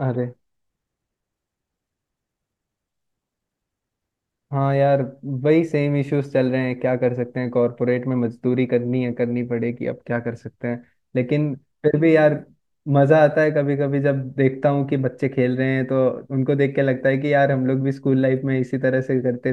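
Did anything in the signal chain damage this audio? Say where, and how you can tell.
No, nothing in the chain left a mark on this speech that I can hear, so there's no stage to point to here.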